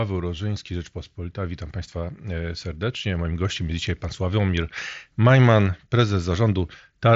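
No technical faults are audible.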